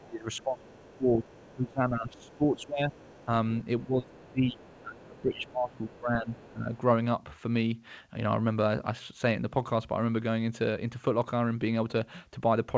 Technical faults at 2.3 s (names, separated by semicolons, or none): speech suppressed in double talk; other side's voice leaking through